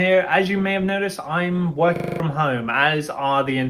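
From 1.96 to 2.2 s the audio shows a system hang loop: one 40 ms slice repeats exactly six times, a 25 Hz machine-gun stutter, and about a fifth of a second of audio is lost. Unlike a dropout, which goes silent, the hardware keeps replaying its buffer.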